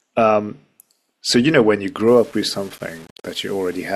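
Speech, with low bit depth without dither from 2.08 s to the end at 3.95 s. The sound turns grainy, with error roughly 30 dB below the signal that rises and falls with it. This is likely rounding to about 7 bits. A waveform would show visible staircase steps and quiet stretches collapsing to flat lines, and a spectrogram would show a broadband haze that appears only under the sound.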